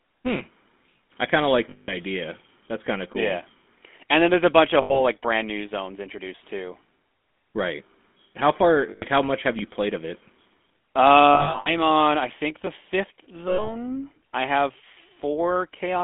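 A speech recording carried over a GSM full-rate codec, and the coding damage is plainly audible throughout. The voice has a gravelly, buzzy roughness from the coarse pulse excitation, consistent with the 13 kbit/s full-rate coder. On a spectrogram, energy sits only between about 200 Hz and 3.6 kHz, with nothing above and a smeared, grainy texture in the harmonics where the excitation has been thinned out. Short clicks recur at a steady 3.07 s spacing from 0.36 s to about 15.74 s, about seven in all. These are clock drift buffer slips, most likely from two devices whose clocks disagree by a few hundred parts per million, so the buffer between them periodically drops or repeats a block. The size of each jump fits roughly 70 samples. In the waveform each one shows as a small discontinuity, and on a spectrogram as a thin vertical line across the band. Lost GSM frames occur at 1.70–1.95 s (180 ms), 4.82–5.01 s (80 ms), 8.90–9.04 s (120 ms) and 13.48–13.69 s (100 ms). 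Another cluster is scattered over 11.34–11.74 s, totalling 260 ms, with the longest gap about 100 ms. In each, the last good sound is held as a rough, metallic ring. The spectrogram shows frozen, stripe-like harmonics.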